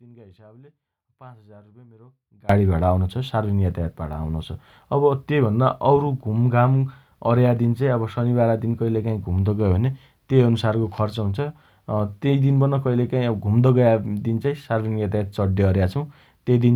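An audio dropout to a faint residue runs from the start of this speech recording to 2.49 s. The signal is already gone as it opens, leaving a faint leak about 25 dB down, then snaps back abruptly. The likely cause is an upstream break while the path stayed live.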